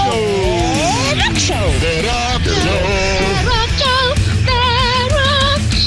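No technical faults are audible.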